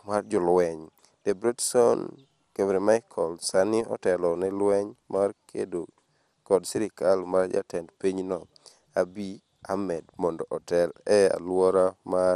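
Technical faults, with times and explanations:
Throughout, MP2 compression: the speech is dull, with plainly audible gurgling, granular distortion and nothing above 15.1 kHz. This is likely MPEG Layer II coding starved of bits, fitting roughly 80 kbps. Unlike a plain low-pass, upper sub-bands flicker and the remaining ones sound coarsely quantised.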